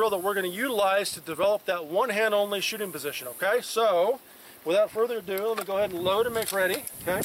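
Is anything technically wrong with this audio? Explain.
No, nothing here stands out as a technical problem, so there's nothing to flag.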